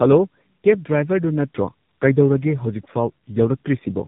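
Tandem speech coding runs throughout the speech. The signal passed through two speech codecs in a row, decoded and re-encoded at the border between them, with the second coder working on the first one's already degraded output. The sound points to a low-rate coder such as G.723.1 followed by AMR-NB. The result is rougher, more muffled and more warbly than a single pass, with nothing above 3.8 kHz.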